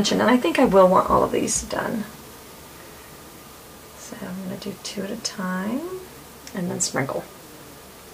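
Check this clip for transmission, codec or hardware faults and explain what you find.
A soft, even rattle runs under the sound from 0.11 s to 8.12 s, a tick roughly every 20 ms, several hundred in all, clearest where the signal is loud and sustained. These are clock slip clicks, likely from two devices running on unsynchronised clocks that differ by around a tenth of a percent. Each time that mismatch adds up to one whole sample, a single sample is dropped or repeated, leaving a tiny step in the waveform.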